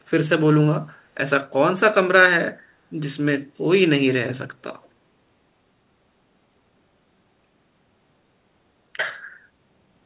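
Echo leak at 4.83 to 4.88 s: a very faint scrap of delayed speech, arriving about 0.41 s late, likely slipping past a far-end echo canceller.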